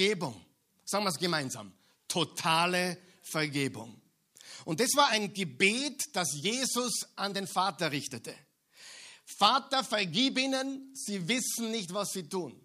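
Listening to this speech recording, nothing stood out as a technical problem at any point.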